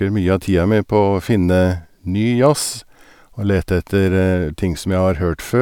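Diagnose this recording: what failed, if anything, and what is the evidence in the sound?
Nothing failed, and the sound gives no evidence of a fault at any stage.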